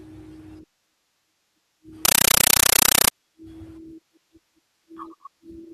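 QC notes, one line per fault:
2.05–3.11 s, compressed stream played as audio: for about a second the speech drops out and you get harsh, very loud chattering static. It pulses 31.25 times a second, each burst roughly 8 ms of noise then silence, which fits an AC-3 frame, likely around 384 kbps, being pushed straight to the output as if it were PCM samples instead of going through a decoder. That on-off framing is what gives it the rattling texture.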